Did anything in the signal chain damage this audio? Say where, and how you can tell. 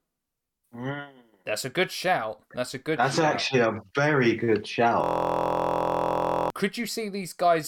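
Yes, there's a system hang loop at the driver or buffer stage. Right after "actually a very good", from 5.04 to 6.50 s, a 23.2 ms slice of sound repeats dozens of times, producing a steady 43.1 Hz buzz in place of the speech. The host or driver froze while the hardware kept replaying the same ring buffer, and the loop length fits a 1024-sample buffer. About a second and a half of real audio is gone.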